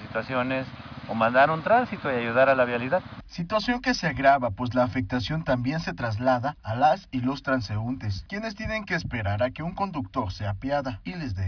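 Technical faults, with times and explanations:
No technical faults can be heard anywhere in the clip. There is nothing here to time or explain.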